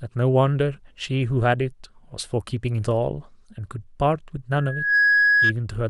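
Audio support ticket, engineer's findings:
Mic-to-speaker loop gain above unity at 1.7 kHz: loudspeaker feedback squeal, 4.58–5.53 s. Tone swells within half a second, ending a few dB above speech.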